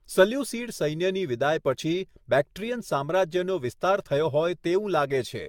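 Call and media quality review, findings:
Generation loss, throughout the speech: swirly, smeared, hollow texture, consonant attacks blurred, nothing above 17 kHz. Likely repeated lossy re-encoding, about ten passes, consistent with an AAC-LC chain at around 96 kbit/s. Each pass requantises on a shifted frame grid, stacking noise and spectral holes.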